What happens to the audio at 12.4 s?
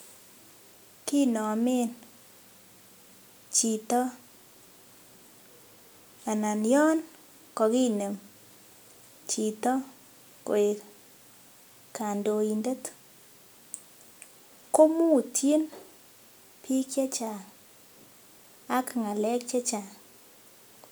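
Nothing goes wrong at 12.4 s; the speech continues intact through that moment, with no dropout, glitch or distortion.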